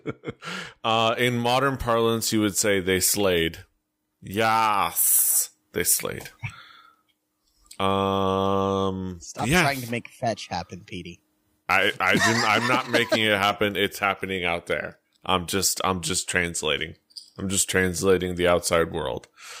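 From 1.19 s to the end, the speech has pre-emphasis left on. The treble was boosted and the matching cut was never applied. At 10 kHz it sits about 10 dB above 1 kHz, which fits a 50 µs FM curve. The result sounds thin, bright and sibilant.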